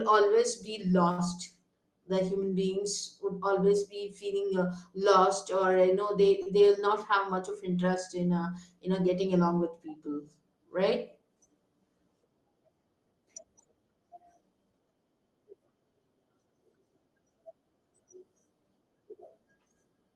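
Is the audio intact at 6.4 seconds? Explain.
No. From 6.42 to 6.48 s there is a short stall from a late packet. A packet missed its playout time, the jitter buffer emptied, and the receiver stretched the preceding sound by about 39 ms until the packet arrived, then resumed from the same point. No audio is lost, but playback runs 39 ms later from there on. The held sound comes across as a brief unnatural sustain with a faint buzz or dip in level.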